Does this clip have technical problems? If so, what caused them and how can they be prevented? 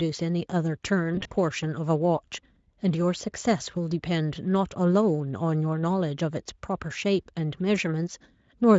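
Yes. From 1.15 to 1.34 s the speech breaks up, which is VoIP packet loss concealed by the speech codec. About 100 ms of audio went missing, scattered over 160 ms, with the longest gap around 40 ms. That pattern fits several separate lost packets. The decoder filled each gap by repeating its last pitch and filter while fading the level, so the speech is stretched and fades. It stays weak briefly after packets resume. Underneath, the Speex coding adds only a light roughness. Prevent it with a steadier network path, a larger jitter buffer, or forward error correction.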